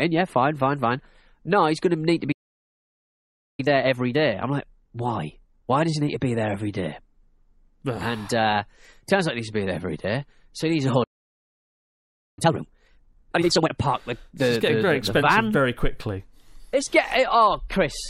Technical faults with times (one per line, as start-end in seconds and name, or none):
2.32-3.60 playback stall
3.60-6.60 time-compressed catch-up
11.03-12.39 playback stall
12.39-13.71 time-compressed catch-up